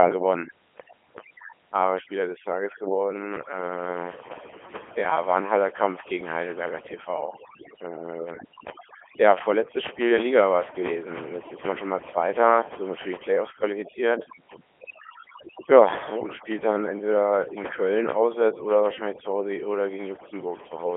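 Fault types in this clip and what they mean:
Overdone noise removal: A noise reduction stage set too aggressively runs through the whole clip. It pulls individual frequency bands down hard whenever their level sits close to its noise estimate, and the quieter parts of the speech are cut along with the noise. The pauses fall to near silence speckled with brief tonal twinkles, while in the voice itself soft consonants and decaying syllable tails are eaten away.
Codec 2 vocoder: The speech has passed through Codec 2, a very low-rate digital-radio vocoder. It transmits only pitch, voicing, energy and a coarse spectral envelope, so the decoder rebuilds the voice from sine waves rather than keeping the original waveform. The result throughout is a heavy, buzzy, robotic character, which fits the 3.2 kbit/s mode. It is confined to a telephone-style band of roughly 300 Hz to 3.4 kHz, with nothing at all above 3.7 kHz.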